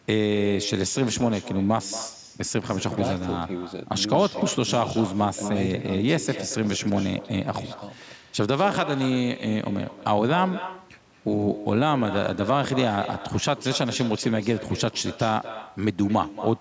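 All the way through the speech there's an echo with no canceller: a thinner copy trails each phrase by about a fifth of a second, roughly 13 dB down.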